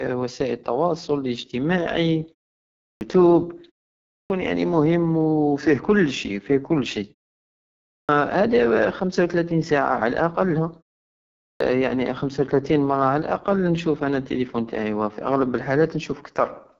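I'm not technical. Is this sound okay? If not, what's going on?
No. The whole recording goes through the AMR wideband (HD Voice) codec, the phone-call format, at one of its lowest quality settings. The speech sounds rough and raspy, and the top of the sound is cut off. Because this affects the entire clip evenly, it is caused by compression, not by a bad microphone or noise.

There is also a clipped start after a pause four times, at 2.72, 4.01, 7.76 and 11.32 seconds. Each time, about 0.3 seconds of speech is missing as talking resumes, just before "يعني مهم فيه" at 4.01 and "خمسة وتلاتين مرة على" at 11.32. The first sounds are chopped off. The playback device was slow to wake up again after going quiet. The quiet pauses themselves going fully silent is normal and loses no speech.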